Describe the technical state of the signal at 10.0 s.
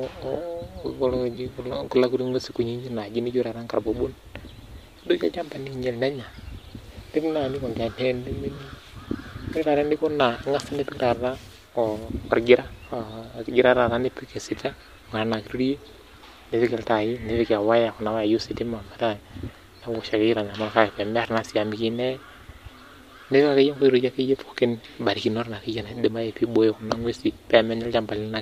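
At 10.0 s the speech is intact, with no dropout, distortion or other fault in the signal at that moment.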